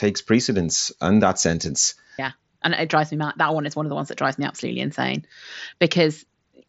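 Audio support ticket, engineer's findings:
No faults found in this speech clip. The Bluetooth mSBC headset codec path works as expected: bandwidth stops near 7.7 kHz, with light codec grain on louder syllables, consistent with a standard wideband headset link.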